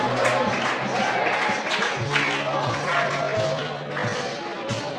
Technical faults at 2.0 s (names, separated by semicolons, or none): time-stretched section